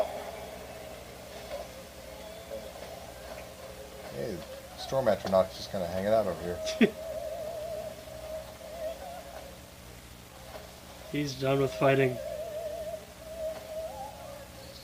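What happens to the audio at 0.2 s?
Nothing goes wrong at 0.2 s; the audio plays through that moment intact, with no dropout, click or distortion.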